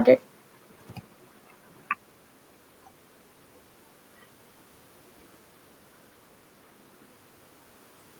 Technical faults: none

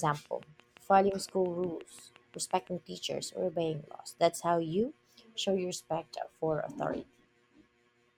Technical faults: train of clicks

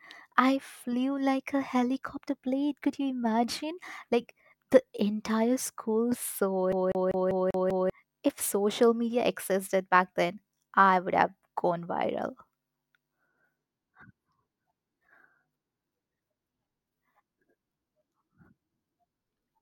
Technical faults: CD stuck on one turn

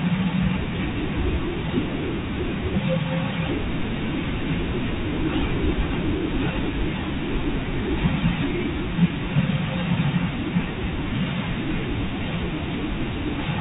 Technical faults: loose connector crackle; packet loss with pitch repetition

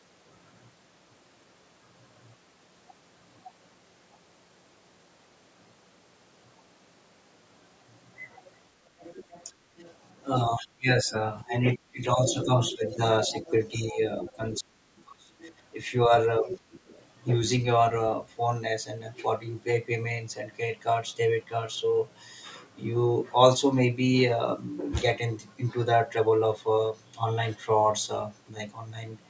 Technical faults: other side's voice leaking through; speech suppressed in double talk

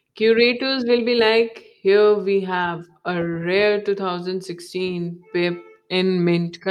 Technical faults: none

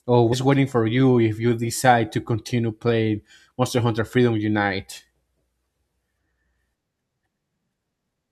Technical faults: damaged data in a compressed stream

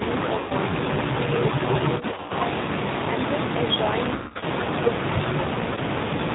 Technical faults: G.729 codec; VoIP packet loss concealed by the speech codec

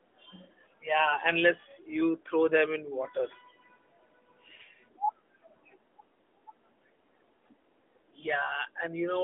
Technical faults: none

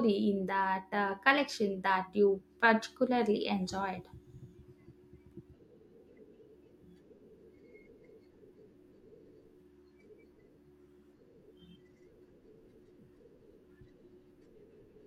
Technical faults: none

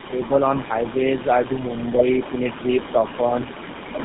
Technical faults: tandem speech coding; echo leak

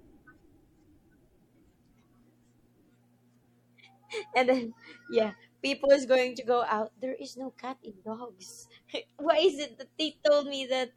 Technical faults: MP3 compression

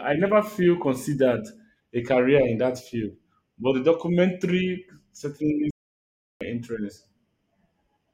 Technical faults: playback stall

